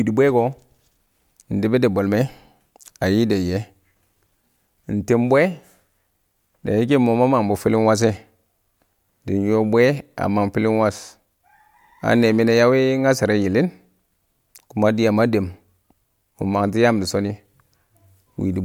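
No technical faults can be heard in this speech recording.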